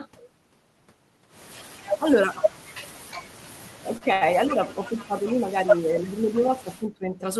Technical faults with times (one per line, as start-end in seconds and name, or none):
1.71-2.46 speech suppressed in double talk
3.81-7.25 speech suppressed in double talk
3.97-4.24 short stall from a late packet